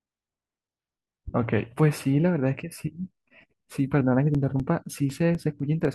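From about 4.35 s to 5.85 s the speech picks up a run of periodic USB or driver dropouts: about seven tiny gaps, one every 0.25 s, each a couple of milliseconds of audio swapped for silence. Something is stalling the USB bus or audio driver on a fixed cycle, so a sliver of signal never arrives. You hear it as an evenly spaced tick riding on the voice, and it's audible only where there's sound to interrupt.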